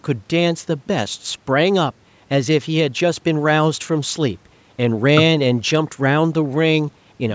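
Nothing goes wrong anywhere in the speech here; it just carries the usual marks of a call's microphone processing, with the lowest bass trimmed away and nothing above 8 kHz.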